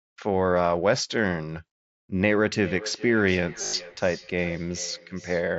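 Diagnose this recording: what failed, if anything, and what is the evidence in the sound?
Call processing failed with feedback echo between two devices. From 2.55 s to the end, the speech returns at roughly 0.4 s intervals, up to about 17 dB below the direct sound. A second device's playback re-enters a microphone whose echo canceller cannot see it. On a spectrogram, fainter, thinner copies of each syllable repeat in a regular horizontal stagger.

The Bluetooth link shows concealed Bluetooth headset packet loss from 3.61 to 3.73 s. About 105 ms of that 120 ms stretch was rebuilt, the longest run 75 ms, from repeated pieces of earlier waveform. It is heard as a held buzzy tone. Within the mSBC band, which stops at 8 kHz, the waveform shows a flat-level periodic patch and the spectrogram shows smeared, comb-like striations.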